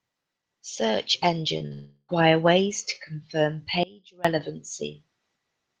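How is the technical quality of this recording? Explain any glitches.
The speech carries four glitches in two clusters, one around 1.6 to 2.1 seconds and another at about 3.8 to 4.2 seconds. All of it has passed through a call codec whose top end stops near 12 kHz, which points to Opus running at a modest bitrate.

Short concealed packet loss hits twice, at 1.57 to 1.64 s and at 1.67 to 1.73 s. About 20 ms and then 40 ms of audio arrived too late to decode. The receiver patched each hole by extending the preceding sound, then blended back into real audio, trimming roughly 13 ms after the first patch to stay in step. The result is a quick smear or wobble, and any brief consonant there can disappear.

A long network dropout follows straight on, from 1.73 to 2.11 s, just before "ways to confirm". It was likely caused by a run of packets that never arrived, about 360 ms in all. Concealment stretches the last sound into a fading buzz or hiss across nearly all of that span and leaves only a sliver of silence. 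The speech then resumes with the missing stretch simply gone.

An audio dropout to a faint residue occurs from 3.83 to 4.25 s, after "ways to confirm". For about 0.41 s the wanted signal vanishes abruptly, likely because the signal feeding the path was interrupted while the path itself stayed open. Instead of true silence, the gap holds a faint trace of sound about 25 dB below normal level. It snaps back without any fade, so it sounds like a cut rather than a pause.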